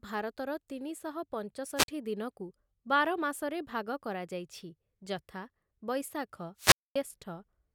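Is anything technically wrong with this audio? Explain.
Yes. At 1.76 to 1.88 s and 6.57 to 6.96 s, hiss swells and the speech drops out for 47 ms, then 238 ms. This is wireless microphone squelch dropout: the FM signal fades and the receiver mutes.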